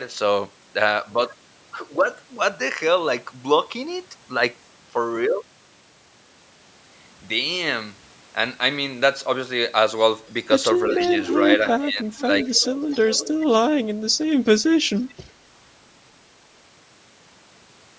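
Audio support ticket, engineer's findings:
Echo leak: delayed copy of the speech trailing the talker by about 360 ms, strong at 10.93–11.70 s (about 5 dB under the speech). Weaker scraps at 12.15–12.23 s (about 20 dB down), 12.41–13.36 s (about 15 dB down) and 14.97–15.32 s (faint, about 30 dB down). Likely cause: the far end is on a loudspeaker, and its echo canceller fails to remove the pickup, so the residual returns across the round trip.

Speech suppressed in double talk: speech dips at 11.79–12.15 s, roughly 15 dB at the deepest point, over about 0.3 s in total, while the far side plays on the loudspeaker. Likely cause: the canceller cannot separate the local talker from the loudspeaker echo during the overlap and attenuates both, pulling the talker down with the echo.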